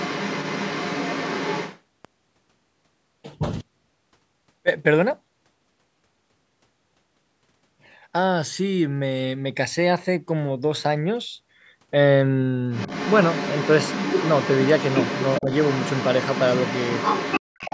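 Right from the start, up to 1.8 s, you can hear a second voice sitting under the speech, roughly 10 dB down. That's the other side's voice leaking through, likely loudspeaker echo the canceller didn't fully scrub from the mic. It comes back stronger from 12.72 s to 17.41 s, only a few dB under the talker, which is likely the same residual echo.

Around 15.4 to 15.5 s, the talker's speech briefly sags by a few dB for about a tenth of a second. That's speech suppressed in double talk, likely the canceller ducking everything while both sides were going at once.

Then from 17.41 to 17.58 s the room sound drops away by about 40 dB for roughly 150 ms. That's background gated by the echo canceller, clamping the mic hard while the loudspeaker played. Straight after, from 17.58 s to the end, the leaking far-end voice is back at roughly 10 dB down, likely echo again. The call's mic processing tops out at 8 kHz throughout.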